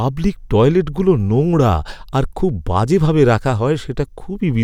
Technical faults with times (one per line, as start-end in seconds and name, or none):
none